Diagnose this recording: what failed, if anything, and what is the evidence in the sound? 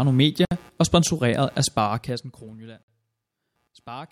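Computer activity noise enters in the analogue wiring, throughout the speech. A scratchy buzz pulses roughly a hundred times a second, about 35 dB below the speech. Unlike steady mains hum, it rises and falls with processor, graphics or mouse load on the shared ground, not with the speech.

A gap at a join of encoded pieces is a codec-stage fault. Silences open at 0.45–0.51 s (63 ms), just before "og sponsoreret af", and at 2.83–2.88 s (54 ms). Each encoder run's start delay and end padding were left in. Unlike a network dropout, nothing is lost: the speech resumes exactly where it stopped, with smeared edges.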